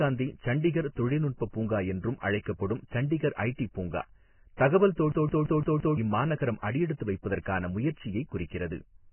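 Throughout, the audio is band-limited with nothing above 3 kHz and has heavy grainy, hissy damage to the treble, likely from Vorbis compression at a very low bitrate of around 11 kbps.

At 4.57 s, pre-echo puts a hiss of about 19 ms ahead of a sharp attack, because the codec spread its quantisation noise across the whole block, and the attack sounds smeared.

From 5.12 to 5.97 s, a system hang loop repeats one 171 ms slice of audio five times at 5.86 Hz. That fits an 8192-sample ring buffer cycling while the system froze. It sounds like a stutter, and about a second of audio is lost.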